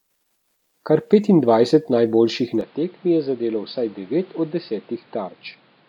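At 2.61 s, right after "petindvajset najboljših", the speech turns duller, quieter and slightly noisier through to the end, with no gap, likely an input switched to a poorer device. A spectrogram shows everything above 5.1 kHz abruptly vanishing; the waveform shrinks slightly.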